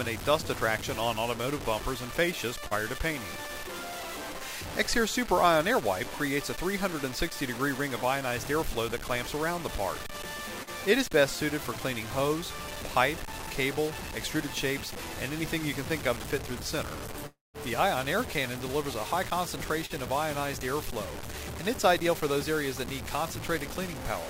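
A coarse, grainy distortion runs through the whole clip, tracking the sound and sitting roughly 10 dB below it, so quiet passages turn gritty and sputter. That points to low bit depth without dither, likely truncation to about 5 bits, where the rounding error follows the signal instead of being spread into smooth hiss. At 2.67 to 2.74 s, 10.63 to 10.70 s and 19.86 to 19.93 s there are brief smears lasting a few hundredths of a second. These are short concealed packet loss: roughly 40 ms of audio never arrived, and the receiver bridged the gap by extending the preceding sound for about 35 to 39 ms before blending back into the real signal. From 17.27 to 17.57 s the sound stretches into a fading continuation, then drops to silence before returning with part of the sound missing. This fits a long network dropout, with about 280 ms lost and the receiver's synthetic fill dying away into nothing.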